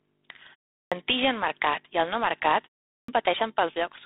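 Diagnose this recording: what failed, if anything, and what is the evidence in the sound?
The codec is the culprit here, specifically G.726 ADPCM. There's a harsh, rasping hiss riding on the speech and tracking its level, and nothing gets through above about 3.8 kHz. That grit fits 24 kbit/s, where too few bits per sample leave the prediction error coarse and noisy.

Playback shows a clipped start after a pause twice. At 0.81 s, after a 0.34 s gap, about 106 ms of onset goes missing, and at 2.97 s, after a 0.37 s gap, about 114 ms. The output device drops into sleep during the silence and wakes too slowly, so each word starts abruptly without its first sounds.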